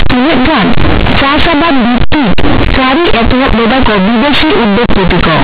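From start to finish the speech is hit by companded audio read as linear: mu-law bytes are played back as plain 8-bit samples with no expansion, so each sign change throws the output across about half its range. The result is loud, harsh buzzing with heavy noise filling the pauses. On a waveform, quiet and loud passages fill nearly the same height; a spectrogram shows broadband energy smeared across the whole band under the 4 kHz telephone limit.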